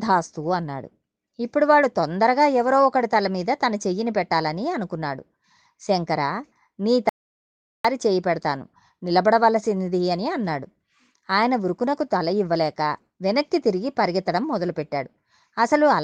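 At 7.09 s the speech cuts off abruptly and stays gone until 7.85 s, so 0.75 s of speech is lost mid-flow. This audio dropout to silence, likely from the input briefly disconnecting or muting, is total silence with no room tone, unlike a natural pause.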